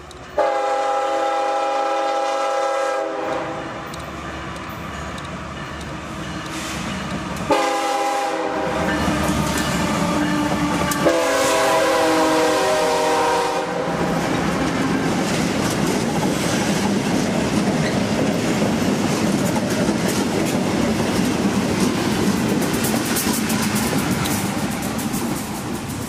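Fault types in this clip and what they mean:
Nothing in the audio stood out as a technical problem on listening.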